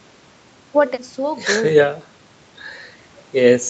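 There are no technical faults to describe in this speech.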